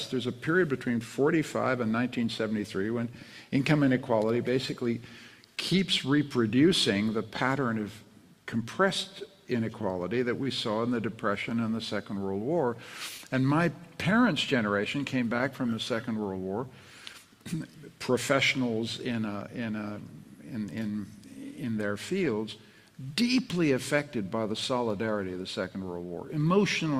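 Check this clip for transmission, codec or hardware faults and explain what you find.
Three related faults are present: clock drift between sender and receiver, the repeated timing corrections it forces, and scattered short gaps.

Clock drift between sender and receiver runs through the whole clip, with the sender's clock about 3% slow. The receiver's buffer keeps draining, so it must stretch the sound to stay fed. On a waveform nothing looks broken; the effect shows only as the corrections and gaps below.

Repeated timing corrections run from 0.26 s to 26.85 s, playing the audio at 98% speed and adding somewhere around 0.7 s overall. The receiver repeats small pieces, always lengthening, at uneven spacing. The result is a slightly dragging, unsteady tempo. On a spectrogram, brief duplicated slices appear as tiny repeated patterns.

Scattered short gaps occur at 4.51–6.02 s (a few), 9.27–17.16 s (several) and 21.52–24.77 s (a handful). 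None is longer than about 10 ms. Each hole was filled by continuing the preceding sound, heard as a tiny tick or smear. A spectrogram shows short, flattened smears where harmonics freeze momentarily.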